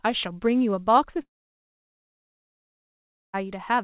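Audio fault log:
1.22–3.35 s, long network dropout: the sound turns into a brief fading buzz, then near silence for about 2.07 s before returning at 3.35 s with roughly 2.12 s lost. This is likely packets ceasing to arrive while the receiver's concealment faded out.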